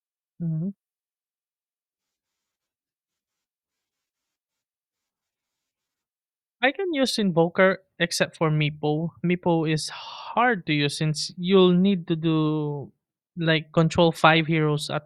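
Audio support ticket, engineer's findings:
No faults found on listening to this speech clip. Nothing in the signal path calls for further action.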